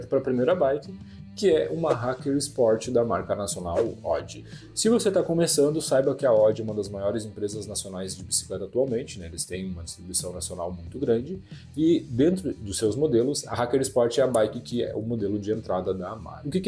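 No dropouts, clicks, distortion or timing faults turn up anywhere in the recording.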